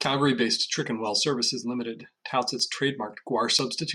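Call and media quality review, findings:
Bit error spikes: sharp isolated ticks at 1.44 s, 2.60 s and 3.59 s in the speech, about -25, -25 and -13 dBFS, the last loudest. Broadband, unrelated to the signal. Probably a flipped bit in memory or on a digital link, jolting one to a few samples by a power of two.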